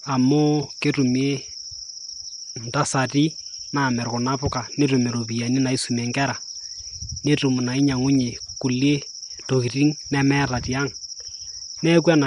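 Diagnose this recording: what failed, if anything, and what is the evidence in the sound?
At the codec stage, the speech was likely pushed through Nellymoser compression. For the whole clip it carries a grainy hiss and a blurred, submerged quality, with nothing above 10.6 kHz. Bits are spread so thinly that weak bands become noise, consistent with roughly 44 kbps.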